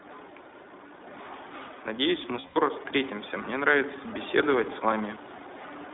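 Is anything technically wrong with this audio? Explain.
Yes. The iLBC codec is applied throughout. The speech is band-limited to about 250 Hz to 3.7 kHz, consistent with 20 ms iLBC frames at 15.2 kbps. It sounds rough and slightly synthetic, and a spectrogram shows nothing above the ceiling.

Lost iLBC frames occur between 2.40 and 2.58 s. The decoder repeats the last pitch cycle with added noise, so the gap sounds like a held, buzzy vowel. The longest dropout lasts roughly a tenth of a second, and the waveform shows repetitive, fading cycles there.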